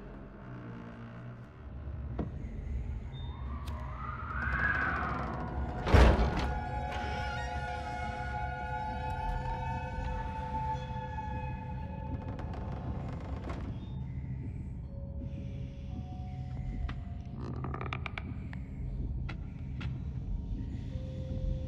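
No technical faults can be heard anywhere in the recording; the signal stays steady and intact throughout.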